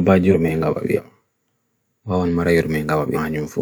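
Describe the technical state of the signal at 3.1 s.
At 3.14 to 3.18 s the speech has compressed frames skipped: a run of encoded frames, missing from the file or refused by the decoder as damaged, is never played, so the audio jumps ahead by about 300 ms, which fits seven or so frames of roughly 46 ms each. The splice comes out as a sudden forward leap in the speech.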